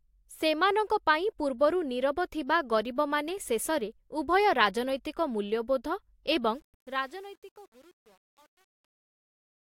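A speech clip whose fade-out turns gritty from 6.55 s, at its worst from 6.85 s to the end at 9.75 s. This is truncation distortion on a fade: the fade stage points to keeping about 9 bits without dither, so the quiet tail collapses into coarse square steps.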